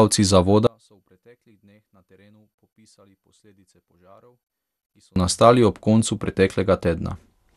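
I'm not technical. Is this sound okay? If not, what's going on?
No. Two problems stand out.

The whole recording has MP2 compression damage, most likely from heavy data-saving. Nothing above 12.2 kHz survives, so the speech sounds dull. A gurgling, grainy roughness is clearly audible throughout.

At 0.67 seconds there is an audio dropout to a faint residue. The speech cuts out abruptly, and only a very quiet trace remains until 5.16 seconds. That is about four and a half seconds lost, likely a broken signal path that stayed switched on.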